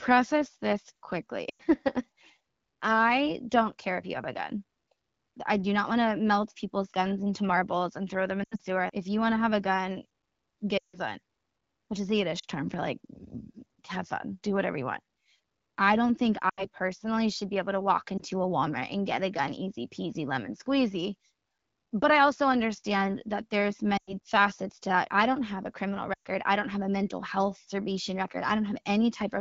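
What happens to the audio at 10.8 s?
The speech collapses to near silence from 10.77 to 10.99 s, then returns weak or rough. These are lost AMR speech frames: about 160 ms failed checks, so the wideband decoder faded out its repeated parameters.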